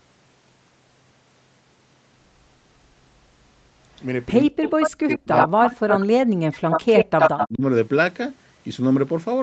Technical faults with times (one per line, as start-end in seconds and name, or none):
4.44-4.66 speech suppressed in double talk
4.71-6.06 echo leak
5.07-6.43 speech suppressed in double talk
6.53-7.48 echo leak
7.31-7.62 speech suppressed in double talk